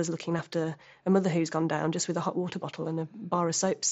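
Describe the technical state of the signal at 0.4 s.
At 0.38 s there is a concealed Bluetooth headset packet loss of about 7.5 ms, which fits a single lost frame. The receiver filled the gap by repeating a matching stretch of the preceding waveform, so instead of the silent hole or click of a plain dropout, the join is almost inaudible.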